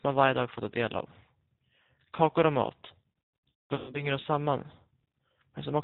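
G.729 codec coding runs throughout this speech recording, plainly audible as a band-limited, slightly rough and synthetic voice with nothing above 4 kHz, consistent with an 8 kbit/s G.729A stream. VoIP packet loss concealed by the speech codec follows from 3.50 to 4.07 s, where the decoder stretches its last frame into a fading tone or noise across gaps whose longest run is about 210 ms.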